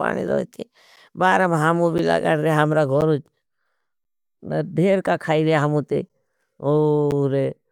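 Periodic USB or driver dropouts begin at 0.96 s and repeat about every 1.02 s until roughly 7.1 s, for about seven events in this speech. Each time, something stalls the USB link or audio driver, and around 10 ms of signal is lost and replaced with silence. Because the gap breaks the waveform abruptly, each one that lands on the voice is heard as a short tick or pop, at a steady, clock-like interval.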